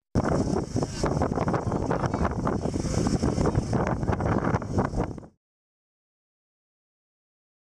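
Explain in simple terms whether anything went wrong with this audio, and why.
Nothing stood out on listening; the sound simply fades out smoothly from around 5 seconds to 5.38 s, the way an editor would end a clip.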